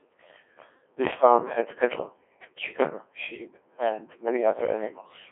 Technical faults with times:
0.00-5.31 Codec 2 vocoder

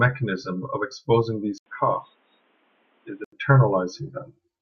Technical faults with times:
1.58-3.32 input switched to a poorer device

